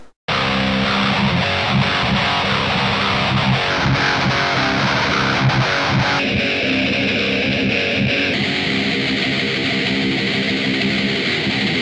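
No technical faults can be heard anywhere in the audio; the signal stays continuous and stable throughout.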